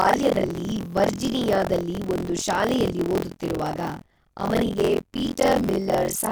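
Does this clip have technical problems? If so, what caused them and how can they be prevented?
Yes. Buffer tearing runs throughout: the program writing the ring buffer and the hardware reading it have slipped into each other, so about a third of every buffer replays audio roughly 50 ms old between two hard joins. This gives a robotic 43.1 Hz rattle over the speech, which fits a 1024-sample buffer. Keeping the writer safely ahead of the read pointer, with proper synchronisation, prevents it.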